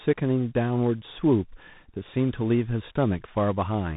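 From start to end the speech sounds rough and noisy, with nothing above 3.8 kHz. This is tandem speech coding: the sound points to ADPCM and CVSD coders in a chain, each re-coding the previous one's already degraded output, so the damage compounds.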